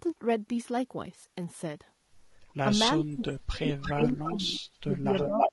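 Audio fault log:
Throughout: low-delay AAC compression. The speech sounds rough and grainy, with noise between the harmonics and a synthetic-sounding top band. This is likely AAC-ELD, whose short frames resolve pitch harmonics poorly, and the damage fits a low bitrate of around 32 kbps.
2.98–5.53 s: speech suppressed in double talk. From 2.98 s to the end the speech repeatedly dips and breaks up, dropping by around 35 dB at worst, over roughly two seconds in total. The likely cause is an echo canceller that could not separate the talker from loudspeaker echo and turned both down.
3.68–4.33 s and 5.17–5.51 s: echo leak. A copy of the speech arrives 325 ms late. It is about as loud as the speech in the first stretch and louder in the second. The likely cause is a loudspeaker on the far side whose echo canceller let part of the pickup through and sent it back.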